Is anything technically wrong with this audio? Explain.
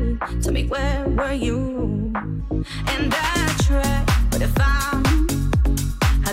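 No, nothing technically wrong is audible anywhere in this audio.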